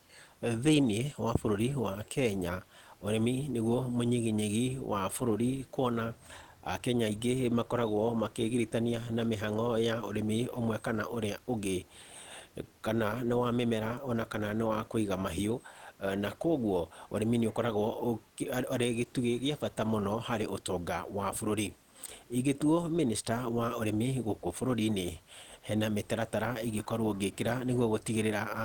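No technical faults can be heard anywhere in this speech recording. A low room noise sits underneath, about 35 dB below the speech, and it belongs to the space the microphone was in rather than to the system.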